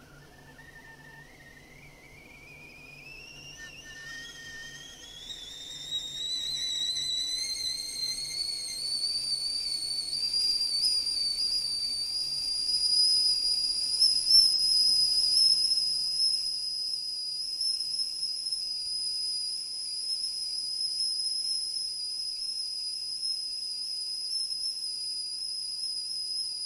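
At 14.53 s the decoder hit AAC frame loss with concealment. About 42.7 ms of coded audio went missing, a gap consistent with a single AAC frame, and the decoder covered it by rebuilding the spectrum from the last frame it received intact, with randomised signs or interpolated energy. Because the gap is so short, the sound around 14.53 to 14.58 s is smeared rather than dropped: a brief, noisy, phasey blur before normal decoding resumes.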